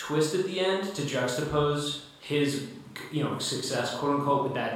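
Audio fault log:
Nothing to log here: the speech runs along with no faults to point at anywhere in the recording.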